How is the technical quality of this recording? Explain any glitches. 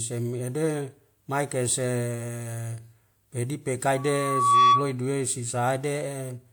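The recording has one clear fault, a loudspeaker feedback squeal. From 3.97 to 4.93 s a 1.1 kHz tone swells over roughly the first 0.7 s to about 10 dB above the speech. The microphone is picking up its own loudspeaker, and at that frequency the loop gain exceeds one, so the tone reinforces itself until the loop is broken.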